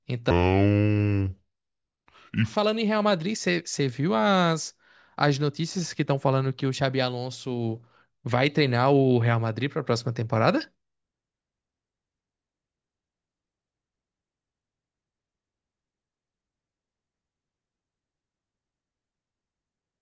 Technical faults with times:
0.31-2.56 wrong sample rate

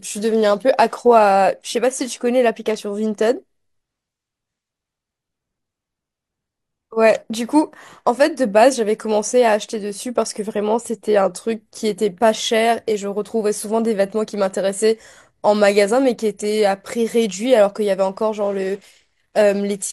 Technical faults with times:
none

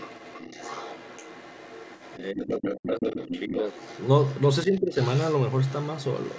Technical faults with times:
0.00-4.41 other side's voice leaking through
2.19-3.68 speech suppressed in double talk
4.65-4.98 speech suppressed in double talk
5.00-6.39 other side's voice leaking through

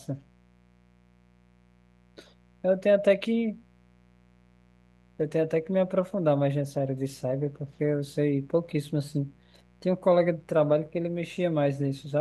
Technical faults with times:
0.00-12.20 mains buzz

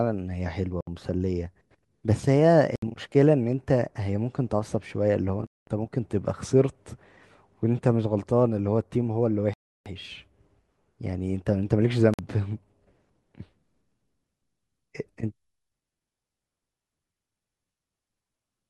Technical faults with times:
0.81-0.87 Bluetooth stall
2.76-2.82 Bluetooth stall
5.47-5.67 Bluetooth stall
9.53-9.86 Bluetooth stall
12.14-12.19 Bluetooth stall

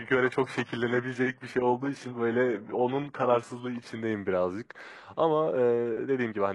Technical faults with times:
0.00-4.00 adaptive stream starting at a low bitrate

